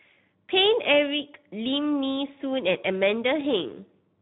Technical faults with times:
0.00-4.21 Speex codec

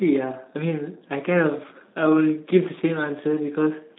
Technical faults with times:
0.00-3.98 G.723.1 codec

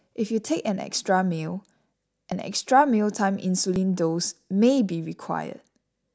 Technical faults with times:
2.32 dropped buffer (overrun)
3.76 dropped buffer (overrun)

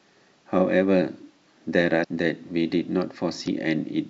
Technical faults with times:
2.00-2.05 damaged data in a compressed stream
3.44-3.48 damaged data in a compressed stream

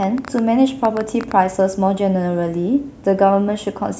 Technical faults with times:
0.03-1.32 train of clicks

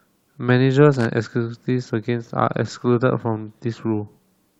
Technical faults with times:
0.94-1.06 loose connector crackle

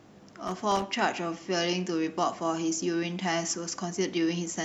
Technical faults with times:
0.47-0.82 loose connector crackle

